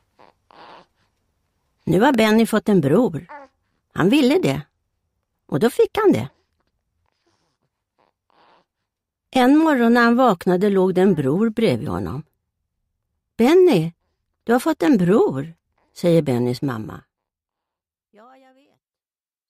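Two loud pops break into the sound, at 2.14 to 2.16 s and at 14.88 to 14.90 s. Each is a single sharp thump, the first peaking roughly 10 dB above the surrounding signal and the second about 5 dB above it, with the audio continuing underneath. The likely cause is a brief voltage step from a plug, switch, static discharge or driver glitch. On a waveform each appears as a narrow spike standing above the envelope, and on a spectrogram as a thin vertical stripe spanning the full frequency range.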